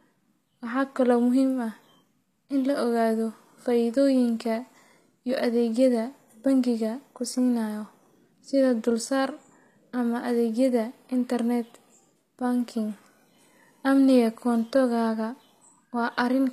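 Throughout the speech, the likely cause is HE-AAC compression at a low rate, around 24 kbps. The treble is rebuilt from copied lower bands rather than coded, so s sounds come out plainly gritty and metallic, and nothing reaches above 14.9 kHz.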